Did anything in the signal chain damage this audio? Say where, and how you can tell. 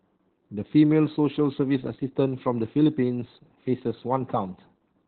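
Yes, at the codec stage. Opus voice compression damages the whole clip. Nothing survives above about 4.2 kHz, and the speech sounds muffled, hoarse and slightly robotic. That points to narrowband SILK coding near 8 kbps, with coarsely coded excitation.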